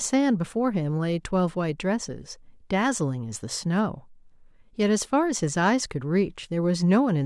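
No technical faults are audible anywhere in the speech recording.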